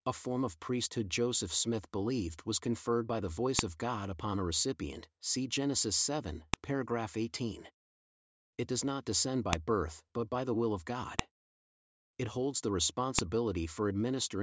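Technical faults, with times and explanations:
3.59 s, 6.54 s, 9.53 s, 11.19 s and 13.19 s, file header played as audio: each of these moments has a sharp, loud click or snap, shorter than a couple of milliseconds, cutting into the speech wherever it falls. These are the joins where separate WAV pieces were spliced or streamed together with their headers left in. The few dozen header bytes are read as sample values, producing a brief burst of unrelated amplitudes that jumps abruptly away from the waveform.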